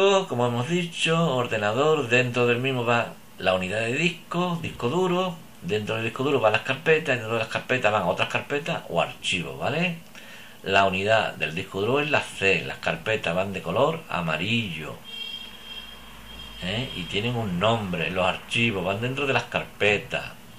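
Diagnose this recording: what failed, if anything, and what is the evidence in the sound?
A resampler restarted on every block, in the sample-rate conversion stage, puts a buzz at 100 Hz under the sound for the whole recording, present only while signal plays. Each 10 ms block was converted alone, likely 48 to 44.1 kHz, leaving an error at every edge. A spectrogram shows 100 Hz harmonic lines, and the waveform shows small discontinuities every 10 ms.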